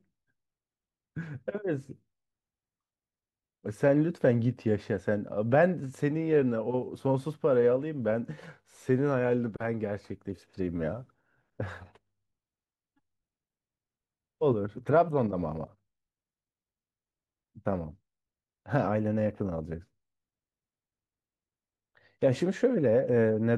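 There are no technical faults to describe, so there is nothing to place in time order.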